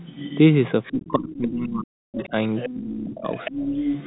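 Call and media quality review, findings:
Other side's voice leaking through: second voice at 0.00–0.38 s, 0.83–1.12 s, 1.30 s, 2.17 s, 2.56–2.74 s and 3.18 s to end, ranging from about 25 dB to about 5 dB below the talker. Likely residual echo missed by the echo canceller. An added voice, unlike suppression, which removes sound.

Speech suppressed in double talk: talker dips at 0.91–2.34 s (down about 40 dB at worst) and 2.69–3.34 s (about 30 dB), overlapping far-end bursts. Likely echo canceller ducking both sides when it cannot separate them. A gap in speech, not an extra voice.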